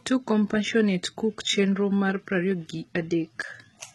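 Throughout the speech, the treble sounds synthetic, with s sounds turning gritty and metallic and nothing above 11.8 kHz, which fits heavy HE-AAC compression at around 16 kbps as the likely cause. Unlike plain low-pass filtering, the top is present but rebuilt from copied lower bands whose harmonics don't line up.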